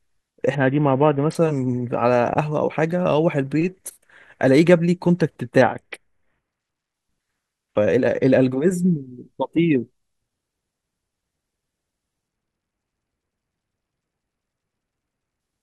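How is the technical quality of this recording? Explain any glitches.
The speech is marred by three Bluetooth SBC bit pool drops, at 0.55 to 1.35 s, 5.62 to 6.94 s and 12.28 to 15.4 s. In each, the link appears to have struggled and the encoder cut its bit budget sharply, which fits a fall from a bit pool of 31 to about 6, near 55 kbps. Starved of bits, the upper sub-bands go nearly empty and the rest are coarsely quantised, so the treble dulls and a gritty noise rises until full quality returns.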